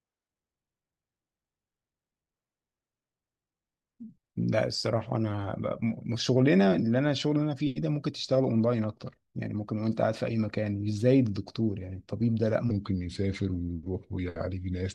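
From 12.71 s to the end of the clip at 14.95 s, a section plays at the wrong speed, running at 0.88 times its original rate. Tempo and pitch drop together, so the speech in this final stretch sounds slower and about two semitones lower, with a heavier, dragged quality. The sudden change at 12.71 s points to a likely clock mismatch, where this portion was resampled or played back against the wrong rate.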